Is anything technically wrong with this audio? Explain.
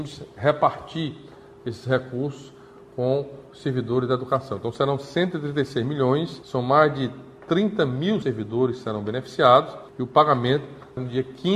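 No, nothing technically wrong turns up anywhere in this audio.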